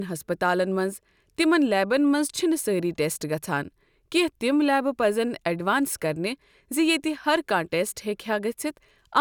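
No technical faults can be heard anywhere here.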